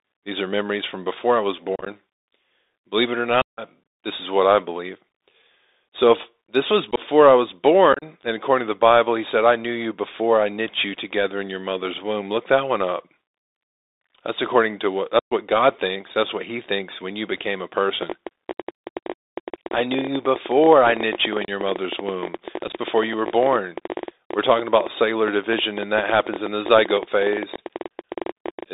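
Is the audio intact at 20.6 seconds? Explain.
No. At 20.6 s two faults overlap. The first is a train of clicks running from 18.03 s to 28.64 s. Sharp, similar pulses arrive about 12.2 times a second at an uneven pace, roughly 150 in all. They peak a few decibels above the speech and tick through pauses as well. Pulses this regular in shape most likely come from interference from nearby equipment or a faulty connection or power supply.

The second fault is the Bluetooth CVSD headset codec, which runs through the whole clip. This coder sends one bit per sample, saying only up or down, and adapts its step size. The band here is confined to 300 Hz to 3.7 kHz, which fits a 64 kbps CVSD link. Loud, bright sounds outrun the step and distort. S sounds turn scratchy, and a granular hiss sits under the speech.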